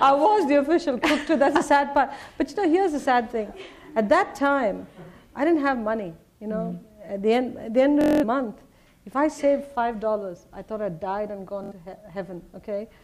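There's Bluetooth stutter in three spots: a brief repeat at 3.02 to 3.06 s, a long machine-gun buzz from 8.01 to 8.24 s, and another at 11.64 to 11.73 s. The receiver kept replaying its last slice while packets were missing, and the sound then picks up ahead, as though it played on.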